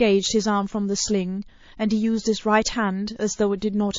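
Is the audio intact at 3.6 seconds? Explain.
No. A short hiss runs from 3.58 to 3.62 s, about 36 ms, ahead of a sharp attack. This is pre-echo. The codec spread its quantisation noise across a block of about 72 ms, so noise rose about 17 dB before the onset. The attack sounds smeared, which points to the encoder never switching to short blocks.

The whole passage also sounds watery and swirly. Weak detail flickers in and out. This damage is plainly audible. It is likely MP3 compression at a low bitrate, which fits about 32 kbps, starving the frequency lines of bits.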